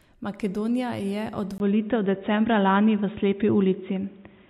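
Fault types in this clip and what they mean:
Input switched to a poorer device: from 1.58 s, after a 20 ms gap, speech turns dull with nothing above 3.8 kHz and faint new noise, likely a different microphone.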